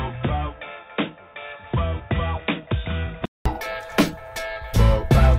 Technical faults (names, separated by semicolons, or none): input switched to a poorer device